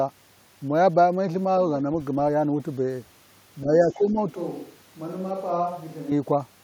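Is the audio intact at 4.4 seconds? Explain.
No. At 4.4 seconds the clip is inside a switch to a distant microphone, running from 4.36 to 6.11 s. The voice abruptly turns roomy and hollow, loses low-end body, and drops by about 5 dB, while room noise rises to roughly 30 dB below the speech. This likely means the close microphone's signal dropped out and a more distant pickup, such as a camera microphone, took over. The return at 6.11 s is equally sudden.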